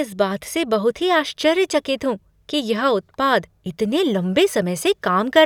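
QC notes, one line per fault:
No faults heard anywhere in this speech recording.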